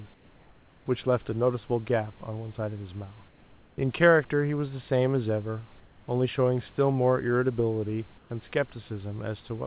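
At 0.14–0.86 s, 3.28–3.78 s, 5.8–6.08 s and 8.18–8.3 s, comfort noise in place of the background takes over the pauses. The textured room noise turns steady, featureless and about 2 dB quieter (about 1 dB at 8.18 s), likely from discontinuous transmission. A spectrogram shows smooth, uniform noise there.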